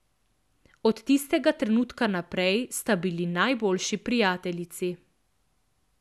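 No technical faults can be heard anywhere in the speech recording. Nothing in the audio points to a problem in how it was captured, processed or played back.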